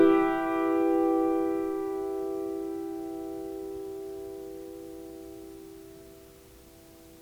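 No technical faults are audible.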